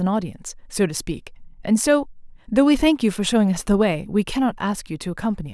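No technical faults can be heard in this speech recording. There is nothing to place on a timeline here.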